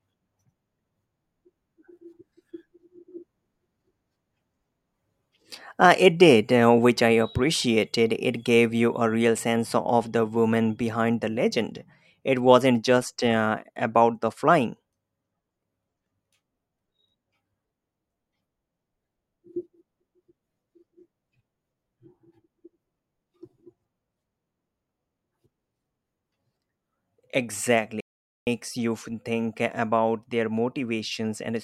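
At 28.00 s the speech cuts out in mid-flow. The output stays silent until 28.47 s, a gap of about 460 ms. Then the sound picks up again. This is a playback stall. The player likely ran short of data, or its audio thread was held up, so nothing reached the output for that time. It is heard as a sudden hole in the speech, long enough to notice clearly.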